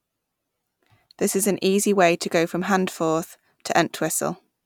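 No technical faults can be heard anywhere in the recording; the speech signal stays steady and intact throughout.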